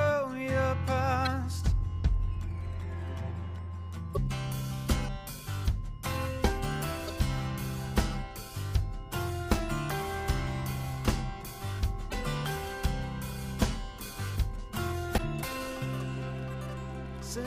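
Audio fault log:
1.25–1.27 s, 4.12–4.17 s, 7.07–7.10 s, 12.08–12.14 s, 15.14–15.20 s: damaged data in a compressed stream. Corrupt frames make the decoder lose sync, producing short chirps, squawks, clicks or holes that show as broadband vertical smears and abrupt waveform breaks.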